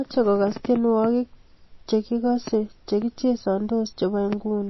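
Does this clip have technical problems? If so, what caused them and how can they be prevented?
Yes. Throughout the speech there is nothing above 5.8 kHz, and a watery, swirling texture is plainly audible, with sibilants turning metallic. This is likely MP3 compression at a low bitrate, which fits roughly 24 kbps, where the encoder drops the treble and lets weak frequency components flicker between frames. To prevent it, encode at a higher bitrate or keep a lossless copy.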